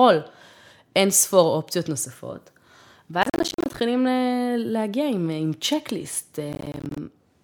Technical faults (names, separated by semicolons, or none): processor overload crackle